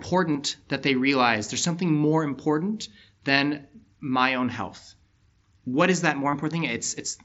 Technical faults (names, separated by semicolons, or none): concealed Bluetooth headset packet loss